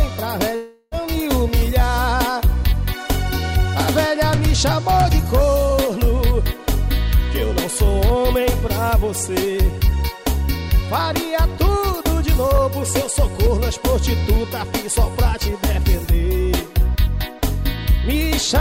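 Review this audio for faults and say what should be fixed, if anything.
From 0.55 s to 0.95 s the sound breaks off and is replaced by a buzzy, smeared continuation of what came just before, lasting about 0.36 s before normal audio resumes. That stretch never drops to silence; the filler covers the whole gap. This is likely a long network dropout: packets stopped arriving, the receiver extrapolated the last audio to hide the hole, and about 0.36 s of the original sound was lost. To prevent it, use a more reliable network path with forward error correction or redundant packets, and a jitter buffer deep enough to ride out short interruptions.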